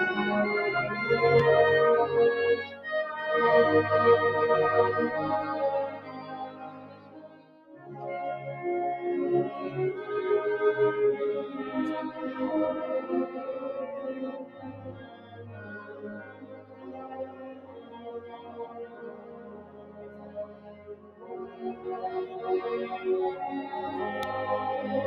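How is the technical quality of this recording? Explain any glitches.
The recording is held back by a speech-oriented noise suppressor working on material it wasn't built for, plus two brief pops and several stretches where the processing audibly pulls the level down.

A noise suppressor applied to music or sounds runs throughout. It treats sustained tones, ambience and decay as noise, so the level swings by roughly 15 dB: onsets pass, held sound sinks. Unlike a fixed filter, it pumps and flutters over time.

Loud pops occur at 1.39 s and 24.23 s, each a single sharp click lasting about 25 ms and peaking about 15 dB above the surrounding audio. A likely cause is an electrical step from a plug, switch or static discharge. The sound continues unbroken beneath each one, which separates them from dropouts.

The sound is cut by the noise suppressor at 2.68–2.85 s (about 6 dB), 5.9–7.9 s (about 9 dB), 14.37–21.87 s (about 9 dB) and 22.26–22.41 s (about 8 dB). 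Steady or fading parts sink or lose their tails, while sharp onsets survive. That content-dependent dip is what distinguishes these from a pop or a hard gap.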